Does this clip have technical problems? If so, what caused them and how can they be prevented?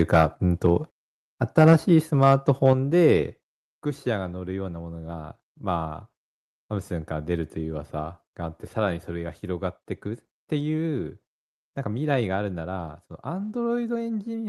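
Yes. There's microphone overload right at the start, from 0.0 to 0.25 s, then again at 1.58 to 1.73 s and 2.23 to 2.72 s. The loudest peaks get their tops sheared off, about 6 dB over at the start and about 2 to 3 dB over later. That gives a small but audible fraction of flattened samples and a crackly, harsh edge. The likely cause is an input gain set too high for the converter. Set the mic gain lower before the call so peaks stay well under full scale.

Right after the second and third distorted bits, and once more about a second later, you also get the microphone volume stepped down, three times: at 1.73 s by about 4 dB, at 2.73 s by about 6 dB, and at 3.75 s by about 5 dB. Each is a sudden drop in level, and the background sinks along with the speech, so it doesn't sound like someone just talking more softly. The likely cause is the call software's automatic gain control reacting to the clipping and pulling the device input down in steps. 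If the gain starts at a sensible level, or automatic mic adjustment is switched off, these jumps won't happen.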